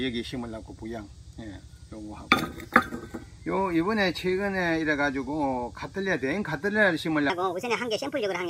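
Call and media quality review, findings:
Section at the wrong speed, 7.30 s to end of clip (8.50 s). Likely cause: playback or editing stage clocking this segment against the wrong rate, running it 1.44x fast. Sound jumps abruptly higher, about seven semitones, and hurried, with pitch and tempo shifting together.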